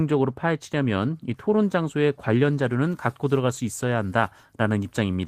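Speech clip. From 2.58 s to the end, pre-emphasis was left on: the treble boost applied before storage was never undone, so the top sits about 8 dB high at 10 kHz relative to 1 kHz, which fits the CD 50/15 µs curve, making the speech thin, bright and sibilant. Between 3.45 and 3.59 s, a lost packet was rebuilt from error correction: the decoder filled about 80 ms, which fits four 20 ms packets, from low-bitrate copies carried in following packets, so there is no gap, but that stretch sounds rougher and noisier.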